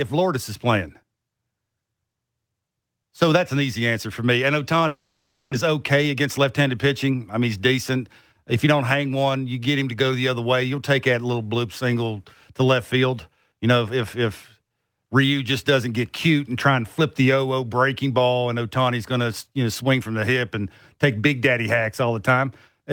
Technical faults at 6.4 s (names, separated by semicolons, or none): jitter buffer speed-up